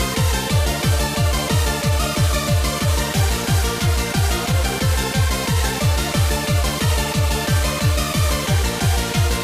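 At 2.47 s a compressed frame is skipped. One frame of the encoded audio never reaches the output, either missing from the file or rejected by the decoder as damaged. The sound jumps forward by roughly 20 ms, the length of that single frame. It is a tiny hiccup where a sliver of sound is gone.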